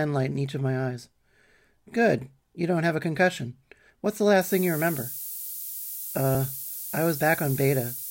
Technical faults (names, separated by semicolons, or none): low bit depth with noise shaping